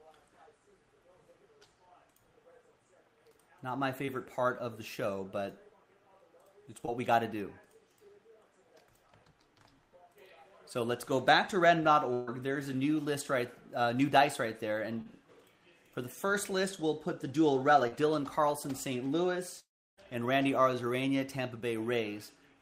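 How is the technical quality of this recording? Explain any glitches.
The recording has repeated network glitches, the longest near the end.

Short concealed packet loss occurs at 4.05, 6.86, 15.01 and 17.87 s. About 20 ms of audio is lost in the first two and about 40 ms in the last two. The receiver extends the preceding sound across each gap, then blends back. Each one is heard as a quick smear or wobble.

A burst of packet loss runs from 12.13 to 12.29 s. About 140 ms never arrived in time. The receiver keeps the last sound going and turns it down throughout, with no silent stretch. It comes across as a fading buzz or hiss. The audio then resumes slightly further on.

From 19.60 to 19.99 s there is a gap of about 380 ms. A brief fading continuation drops into about 0.33 s of silence. Then the audio returns with that stretch missing. This is likely a long network dropout, with nothing arriving for that period.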